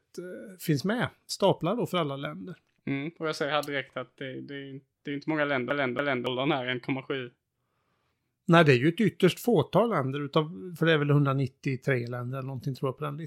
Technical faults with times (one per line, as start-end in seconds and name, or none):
5.70-6.27 CD stuck on one turn